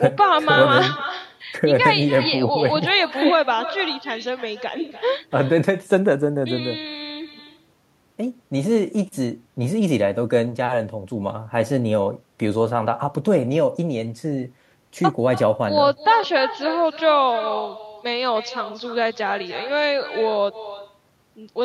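From the very start and all the way through, the speech carries an echo with no canceller. Every phrase gets shadowed roughly a third of a second later by a fainter copy, sitting about 12 dB below the talker, thinner sounding. That's the far end playing the call out of a loudspeaker, its mic catching it, and nothing stripping it out before it makes the network round trip back.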